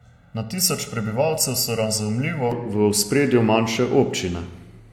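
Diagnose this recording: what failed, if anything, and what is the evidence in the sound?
Channel delay (comb filtering), 0 to 2.52 s: one channel lags roughly 1.5 ms at the buffer stage, and the mono sum sounds hollow, with fixed notches from about 300 Hz.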